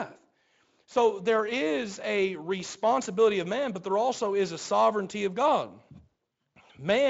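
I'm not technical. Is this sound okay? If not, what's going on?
Yes, this speech recording is in good technical shape, and nothing in the signal is going wrong.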